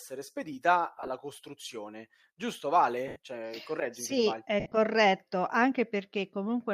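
At 0.98 s, 3.08 s and 4.60 s the speech breaks up with lost LE Audio frames: about 60 ms of gaps scattered over 100 ms, then a solid 80 ms, then 100 ms spread over 120 ms with one run of roughly 70 ms. The decoder repeats the last spectrum with scrambled phase, so the speech turns briefly into a hissy smear that fades. A spectrogram shows blurred, noise-like columns in 10 ms steps, likely from LC3 framing. The waveform loses its periodic shape there.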